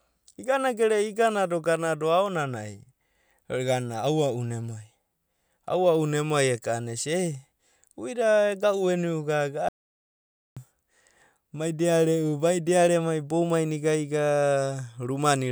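A speech recording with one audio dropout to silence: at 9.69 s the sound cuts out completely, no room tone at all, until 10.57 s. That's about 0.88 s of speech lost, most likely from the input briefly disconnecting or muting while silence kept being written.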